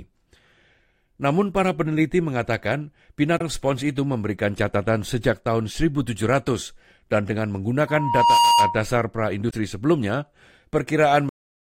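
Damaged data in a compressed stream appears first from 3.35 to 3.41 s, right after "para peneliti mengatakan" and before "spons itu memberikan catatan." Corrupted bytes in the encoded stream leave the decoder unable to read those frames. It loses sync and hunts for the next valid frame header, and for those 60-odd milliseconds the speech turns into a brief glitch instead of clean sound.

A loudspeaker feedback squeal starts at 7.87 s, just after "dan dengan," and lasts until 8.83 s. The microphone is picking up the speaker it drives, and at 944 Hz the loop gain rises above one, so that tone keeps reinforcing itself. It swells over about half a second into a steady whistle about 5 dB louder than the speech.

Damaged data in a compressed stream returns from 9.47 to 9.53 s. The decoder again meets corrupted frames and briefly loses sync, which produces another short glitch of about 60 ms.

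A cut-off end occurs at 11.29 s. The final buffers were never written out, so the speech is truncated mid-sound and falls straight to digital silence with no natural decay.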